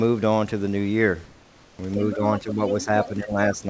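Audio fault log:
1.25–1.79 s, comfort noise in place of the background: for about 540 ms the real room background gives way to a steady, featureless hiss about 2 dB quieter. Discontinuous transmission likely stopped sending during the pause, and the receiver filled the gap with synthetic noise that only roughly matches the background's shape.
2.00–2.16 s and 2.66–2.85 s, other side's voice leaking through: a second voice sits under the talker. It is well below the talker in the first stretch and only slightly below in the second. The echo canceller likely left part of the loudspeaker signal in the microphone feed.
2.15–2.22 s, 2.39–2.60 s and 2.78–3.66 s, speech suppressed in double talk: the talker's level dips by up to around 10 dB, briefly in the first two spans and for most of the last. With both sides talking at once, echo suppression likely turned the microphone down along with the leaking echo.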